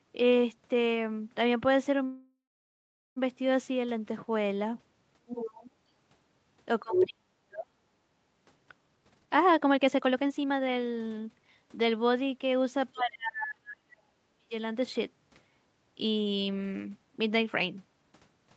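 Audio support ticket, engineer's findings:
Call audio freeze, 2.05–3.18 s: sound hangs, buzzes out, then goes quiet for about 0.76 s before resuming where it stopped. Likely packets stalled and the jitter buffer ran dry. About 1.1 s of gap added, nothing lost.

Other side's voice leaking through, 5.27–5.71 s at about 10 dB under the talker, and 6.93–7.07 s at about 5 dB above. Likely the echo canceller leaving loudspeaker pickup in the mic.

Speech suppressed in double talk at 6.83–7.75 s (dips by around 40 dB), 12.93–13.88 s (around 35 dB) and 14.28–14.53 s (around 30 dB). Talker ducks while the far end speaks, likely the echo canceller clamping both.

Jitter buffer speed-up, 8.87–11.85 s: runs at 137% speed, same pitch, sounds rushed. Buffer overfilled, so it trimmed pitch-period slices back to back, cutting roughly a second.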